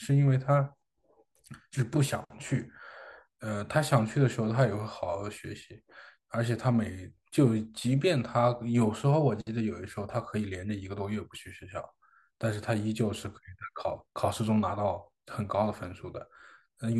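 No technical faults can be heard anywhere in the recording. The speech continues without any interruption, glitch or sudden change in level.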